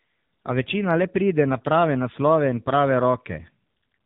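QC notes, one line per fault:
Throughout, AMR narrowband mobile codec: the speech is squeezed through AMR-NB at a low mode, and the heavy damage fits a rate around 6.7 kbps. Nothing above 4 kHz survives, so sibilants and breath lose their edge and the voice sits in a boxed, telephone band. At so few bits per 20 ms frame the vocal-tract model gets only sparse pulses to drive it, leaving a buzzy, synthetic quality.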